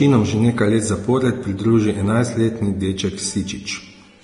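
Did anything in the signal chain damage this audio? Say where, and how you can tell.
Yes, at the codec stage. The speech is hissy and grainy throughout, and nothing sounds above 10.6 kHz. That points to heavy Vorbis compression, likely at a low bitrate near 30 kbps. The encoder cut the treble and quantised what remained so coarsely that detail turned to noise.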